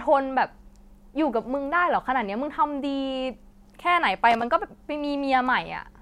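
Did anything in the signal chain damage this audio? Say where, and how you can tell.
Yes: analogue wiring. Loose connector crackle from 4.31 to 4.42 s, where a worn contact chopped the speech, showing as ragged broadband vertical streaks and jagged waveform spikes.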